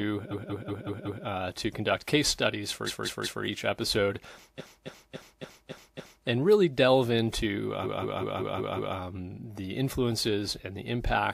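Repeated frames stutter this speech at 0.30–1.23 s, 2.86–3.42 s, 4.58–6.25 s and 7.83–8.94 s, where a block of about 0.19 s (0.28 s in the third) replays several times.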